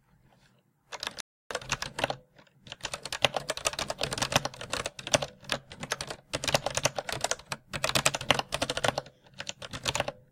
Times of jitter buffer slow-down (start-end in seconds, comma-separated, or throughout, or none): none